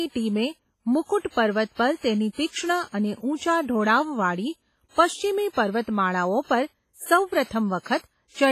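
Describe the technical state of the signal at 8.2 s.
At 8.2 s the speech sounds washy and ringing, with a hiss that swells and fades with the signal and nothing above 15.4 kHz. This runs through the whole clip and is likely WMA compression, heavily damaged, fitting a low bitrate near 24 kbps.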